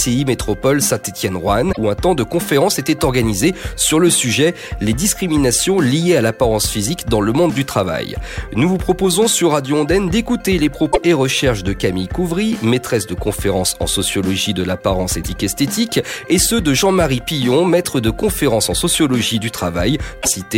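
The audio has four brief breakups from damaged data in a compressed stream, at 1.69–1.78 s, 10.88–10.98 s, 15.19–15.26 s and 20.18–20.28 s, each under a tenth of a second. Corrupted bytes made the decoder misread frames and lose sync until it found the next valid frame header. Unlike a buffer dropout, these spots come from broken frames in the compressed data.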